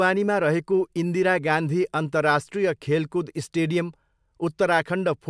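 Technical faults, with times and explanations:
Nothing stood out as a technical fault on listening to this speech recording.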